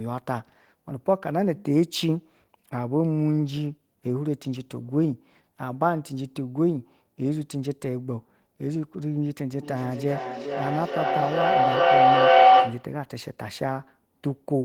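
9.6 to 13.0 s: feedback howl, a loop gaining level each pass and swelling into a tone near 700 Hz about 9 dB above the speech; echo would fade instead.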